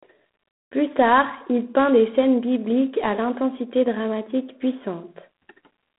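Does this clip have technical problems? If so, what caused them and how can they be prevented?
Yes: G.726 ADPCM coding runs throughout, cutting the speech off above about 3.9 kHz and adding a harsh, rasping hiss that follows the speech level, which fits 24 kbit/s coding rather than plain band-limiting. Running the link at 32 kbit/s or higher would prevent it.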